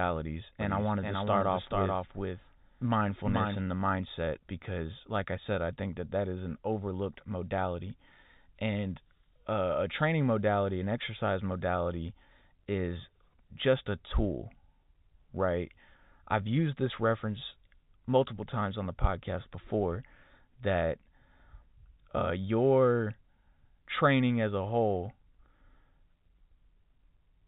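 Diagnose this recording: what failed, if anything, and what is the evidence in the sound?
A doubled audio track shows up from 0.61 to 3.61 s: a full-band copy trails about 400 ms behind, roughly 5 dB down, dry, and starts and stops abruptly. The likely cause is a second, slower capture path mixing in, under the telephone-band G.711 sound.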